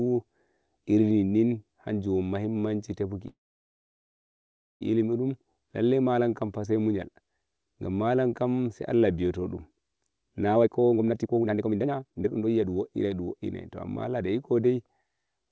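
From 3.28 to 4.83 s, a call audio freeze halts the sound. Nearly all of that 1.5 s is silence. Late packets likely emptied the jitter buffer. The speech then resumes where it stopped, with nothing lost.

From 10.56 to 13.35 s, a jitter buffer speed-up trims pitch periods to cut the built-up delay. The speech runs at 154% speed at the same pitch and sounds hurried. Roughly a second and a half is removed.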